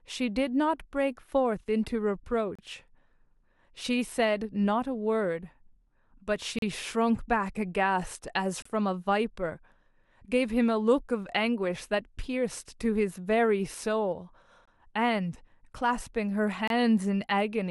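Speech interrupted by five short, hard-edged dropouts to silence, at 2.55–2.59, 6.59–6.62, 8.62–8.66, 14.65–14.68 and 16.68–16.70 s, each 22–37 ms long. This is a gap between stream segments: at 2-second segment boundaries the timestamps leave small holes that the player fills with silence, so time is added but no audio is lost.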